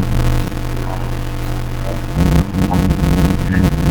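From start to end, a block size mismatch (padded) runs throughout. Each block is written short and topped up with silence. That cuts a gap at about 92 Hz, heard as a steady buzz. It fits 256-sample writes. The speech runs at 0.53 times normal speed, with its timbre intact.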